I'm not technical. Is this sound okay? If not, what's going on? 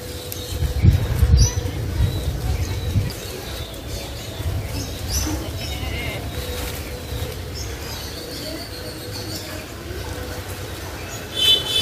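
No, there are two quick glitches from damaged data in a compressed stream, at 3.1 s and 9.72–9.74 s: corrupted file bits briefly confuse the player, causing short blips.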